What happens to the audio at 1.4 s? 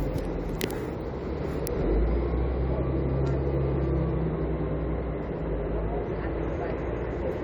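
Nothing goes wrong at 1.4 s: the audio passes through that moment intact, with no dropout, click or distortion.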